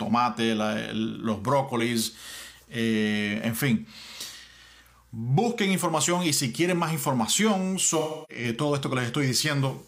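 AAC frame loss with concealment from 7.99 to 8.44 s: the decoder rebuilds missing frames from the last good spectrum, consistent with about seven lost frames.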